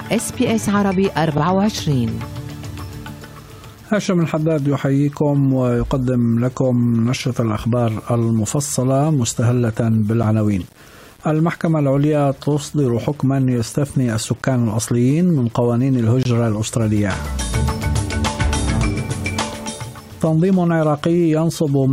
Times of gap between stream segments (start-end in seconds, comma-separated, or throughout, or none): 10.23, 16.23-16.25